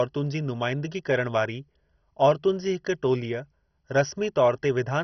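Speech, and the whole thing sounds dull and gurgly with nothing above about 6.1 kHz, likely heavy MP2 compression at a low bitrate, roughly 32 kbps, switching off the upper bands.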